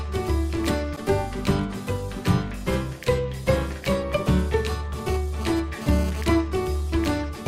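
GSM phone buzz appears from 5.07 to 6.22 s. A nearby 2G handset is transmitting in bursts about 217 times per second, and the audio circuitry picks up and rectifies those radio pulses, turning them into an audible signal. The result is a harsh, rasping buzz at 216.7 Hz, rich in harmonics and unrelated to the surrounding sound. It sits about 14 dB below the signal. It comes and goes, which fits a phone making a brief data transfer.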